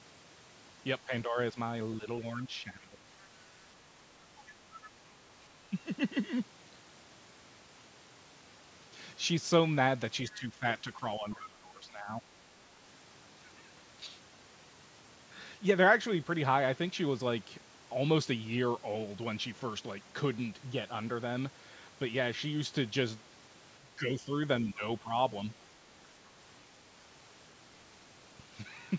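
Between 1.05 and 1.57 s, and again from 1.98 to 3.06 s, the speech sinks by about 10 dB, and in the second stretch by roughly 15 dB. The same dip returns at 5.48 to 5.77 s, across a longer span from 10.31 to 12.24 s, and at 23.81 to 24.32 s and 24.65 to 25.12 s. This is likely speech suppressed in double talk: while the far side was talking, the echo canceller couldn't tell the local voice from loudspeaker echo and attenuated both. On a waveform these show as sudden notches in the envelope. On a spectrogram the upper harmonics thin out or break into gaps, though the band stays within the call's normal 8 kHz ceiling.

At 3.2 to 3.25 s, and again at 4.82 to 4.9 s, a brief fragment of a second voice slips through. The first is very faint, about 35 dB below the speech, and the second is clearer, about 20 dB down. These are likely the other side's voice leaking through, where residual echo survived cancellation. 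Each appears as a short, weak smear of unrelated harmonic striations on the spectrogram and barely registers on the waveform.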